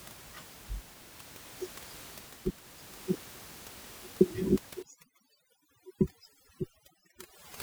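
Speech with room noise about 19 dB below the voice. At 0.88 to 1.04 s and again at 4.6 to 4.68 s the sound briefly jumbles, because of chunks out of order. A 40 ms piece arrives late and plays three places behind where it belongs the first time, one place the second, leaving hard joins. From 4.83 s to the end the background drops and breaks up into twinkling specks. This is overdone noise removal, with the reduction clamping bands near its noise estimate so hard that quieter parts of the speech are cut too.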